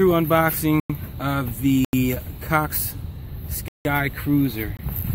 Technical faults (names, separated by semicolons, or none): block of digital silence